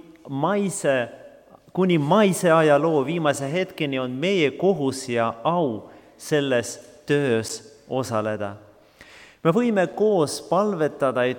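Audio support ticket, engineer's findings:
Block of digital silence at 7.49 s (about 9.1 ms) and 9.93 s (about 5.8 ms, fits a 256-sample buffer): abrupt cut to silence, heard as a tick or dip. Output buffer likely not filled in time. Unlike a dropout there is no fade and no concealment.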